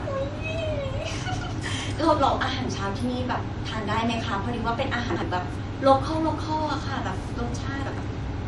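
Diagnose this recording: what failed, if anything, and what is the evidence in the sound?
Low-bitrate audio saved at a high bitrate, throughout the speech, at the codec stage: nothing is present above 11.3 kHz. The likely cause is an MP3 first encoded at a low bitrate and later re-saved at a high one, which cannot restore the removed band or its artefacts.

Chunks out of order at 5.10 to 5.22 s and 7.86 to 7.98 s, at the network or buffer stage: each is a brief jumbled moment. A 60 ms chunk plays one position late, after its successor, so nothing is lost but three hard joins appear.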